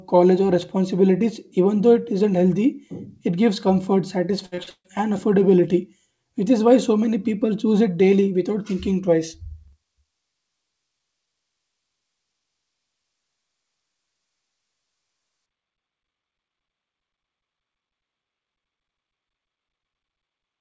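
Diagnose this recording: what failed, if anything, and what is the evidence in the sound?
The network dropped packets repeatedly from 4.46 to 4.87 s, producing the robotic sound of repeated packet loss. There are four holes, the longest 149 ms. Each one is patched by stretching the previous sound, so about 64% of that stretch is concealment, which makes the speech choppy.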